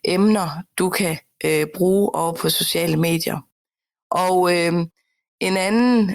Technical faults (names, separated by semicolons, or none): overlap between stream segments